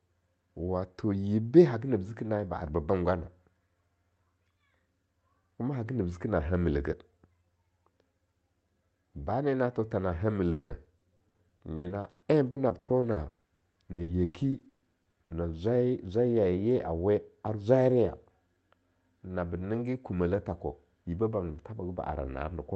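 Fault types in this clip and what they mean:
Repeated packet loss (robotic sound): from 10.51 to 15.32 s, after "tho tha na hamil", gaps up to 190 ms are patched by stretching sound, giving choppy, robotic speech.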